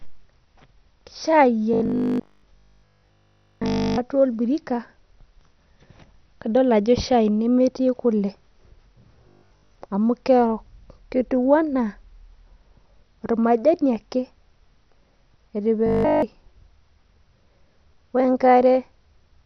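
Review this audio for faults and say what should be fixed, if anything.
The speech is dull and gurgling throughout, with a granular, watery edge on every syllable. This is likely MP2 compression at a starved rate, consistent with about 48 kbps. Too few bits leave the upper sub-bands switched off and the remaining ones coarsely quantised. A spectrogram would show missing upper bands and blocky, flickering patches below them. Encoding at a higher bitrate, or with a more efficient codec, would prevent this.

Robotic sound from repeated short buffers appears from 1.74 to 4.00 s, 9.29 to 9.75 s and 15.86 to 16.22 s. The sound becomes a rigid, metallic buzz at 50 Hz, which fits a 20 ms chunk being replayed while fresh audio is skipped, likely from late-arriving buffers. The first and third spans are essentially all repeats, and the second is mostly repeats. A waveform would show identical 20 ms cycles, and a spectrogram would show evenly spaced 50 Hz harmonic stripes. 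A larger jitter buffer or steadier delivery would prevent it.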